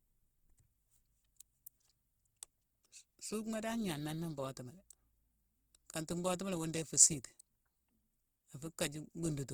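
From start to finish the speech sounds rough and grainy, with a noisy fizz filling the upper bands instead of leaving gaps, while the full bandwidth stays intact. This is likely Opus compression in its music mode, and the damage points to a low bitrate near 16 kbps.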